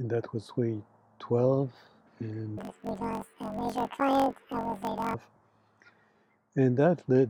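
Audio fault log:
2.58–5.15 s planar audio read as interleaved: each 21.8 ms block plays twice at double speed, producing a robotic 46 Hz buzz, unlike a plain speed-up, since the overall pace holds.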